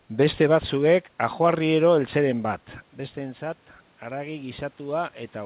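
After the talker moves back around 2.5 s and the input drops by about 12 dB, automatic gain rising sets in from 2.96 s to the end. The gain control slowly lifts the level, so speech and room noise swell together. The waveform envelope widens gradually, and the spectrogram's noise floor brightens with it.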